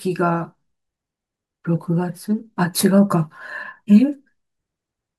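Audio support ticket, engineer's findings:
Nothing stood out on listening; no findings to log against this speech clip.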